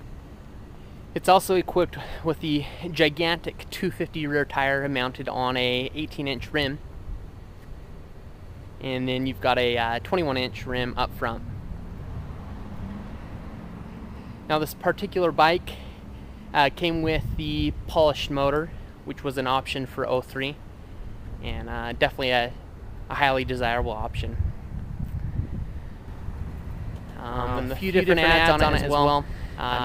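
At 26.08 s the audio suddenly becomes a doubled audio track. A second full-band copy, about as loud as the original, trails it by roughly 150 ms with no decay or room colour, and lasts to the end. It's likely a second, slower capture path getting mixed in.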